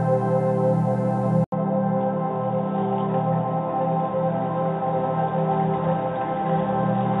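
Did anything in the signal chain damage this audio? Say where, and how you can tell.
Yes. At 1.44 s the input likely switched to a poorer device at the driver stage. The waveform shows an 80 ms gap, then a level drop of about 5 dB. On the spectrogram, everything above 3.8 kHz disappears and a new noise floor about 45 dB down persists to the end.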